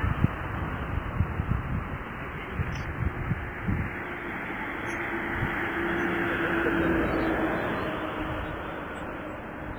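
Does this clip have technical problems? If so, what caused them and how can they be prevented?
Yes. Throughout the clip the audio has a ringing, washy texture, with hiss that swells and fades along with the signal, and quieter detail drops out entirely. This is heavy damage, likely from WMA compression at a low bitrate, around 24 kbps. The transform codec uses long blocks, which smear quantisation noise across tens of milliseconds around each sound. At this bitrate the encoder also discards weak spectral lines, which strips fine texture. To prevent it, keep the audio uncompressed or encode at a much higher bitrate with a better encoder.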